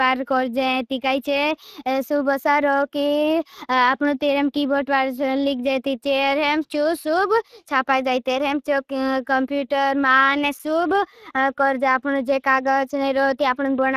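Throughout the speech, Speex codec damage is plainly audible: the CELP coding leaves too few bits for the excitation, giving a noisy, hoarse grain to the speech, which fits a rate of around 22 kbps. Nothing remains above 15.3 kHz.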